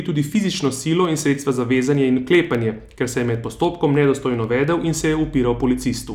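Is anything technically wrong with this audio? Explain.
Yes. The speech carries periodic USB or driver dropouts from about 0.05 s to 6.04 s. Every 0.1 s, a tiny slice of audio is skipped, a fraction of a millisecond each time. Something is stalling the USB bus or the audio driver on a fixed schedule, and the samples due in that moment are simply lost. The result is a steady train of small ticks, roughly ten per second, heard only while the voice is sounding.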